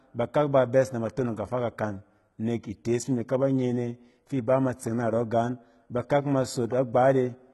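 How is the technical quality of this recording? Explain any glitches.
The recording has one fault, present throughout: heavy codec damage across the whole speech clip, most likely from HE-AAC compression at a rate that fits about 16 kbps. Only the lower spectrum appears truly coded. The treble is rebuilt by spectral band replication, copying lower bands upward, so harmonics misalign and s sounds turn gritty, metallic or lispy. On a spectrogram, the upper band looks like smeared, repeated patches, and there is nothing above 11.8 kHz.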